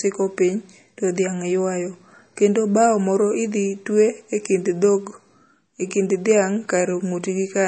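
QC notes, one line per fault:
Throughout, low-bitrate audio saved at a high bitrate: the speech has nothing above 8.4 kHz and carries a dull, swirly coding texture. This likely comes from a low-rate MP3 that was re-encoded much higher, which cannot restore the removed detail.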